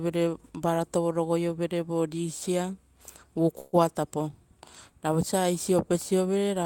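At 3.59 s the speech stalls for about 0.15 s, ending at 3.75 s. This is a call audio freeze: the last sound is stretched into a brief fading buzz or hiss for roughly 134 ms rather than cutting to silence. The likely cause is packets held up in transit, draining the jitter buffer. Unlike packet loss, nothing is skipped. The speech resumes exactly where it stopped, simply running about 134 ms later than before.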